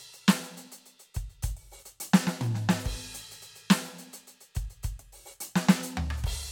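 No technical faults are audible.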